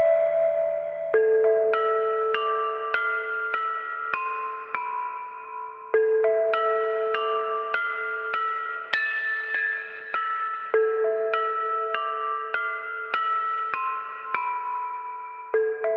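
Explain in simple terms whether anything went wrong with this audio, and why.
A call bitrate drop hit from 8.92 to 13.15 s: the connection squeezed the audio into far fewer bits, so the sound turned rough and muffled, losing its treble.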